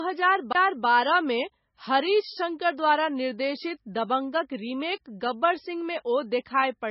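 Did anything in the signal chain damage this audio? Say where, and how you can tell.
Yes, two stages left marks. The first is in the codec, and it runs through the whole clip. The speech has nothing above about 5.6 kHz, and it has that smeared, watery quality you get from heavy MP3 coding. That points to low-bitrate audio saved at a high bitrate. The likely story is a very low MP3 encode, somewhere near 18 kbit/s, later re-saved as 320 kbit/s MP3. The bigger file can't bring back what the first pass threw away, so the bandwidth limit and artefacts are still there.

The second is at playback, a CD skip from 0.53 to 0.55 s. You get a brief mute of around 20 ms, and then the speech carries on from a different spot instead of picking up where it left off. That's the laser jumping to another track of the spiral after a knock or a disc flaw, briefly losing its place, and resuming elsewhere. It's short, but the discontinuity in the speech gives it away.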